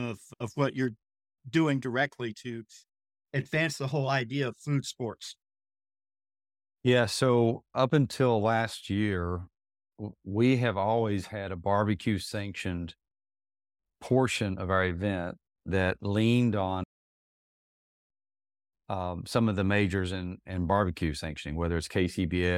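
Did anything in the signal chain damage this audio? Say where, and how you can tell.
Yes. Right after "event that leaned on", the speech stops dead at 16.84 s and stays silent until 18.09 s, about 1.25 s of nothing. When it comes back, it has jumped ahead by roughly 0.7 s, so part of the speech is simply gone. That is a stream reconnect at the network stage: the connection dropped, the player went quiet, rejoined the live stream further along, and restarted its decoder mid-stream.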